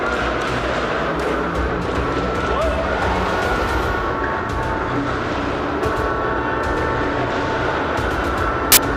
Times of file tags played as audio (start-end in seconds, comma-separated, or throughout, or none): 8.72-8.77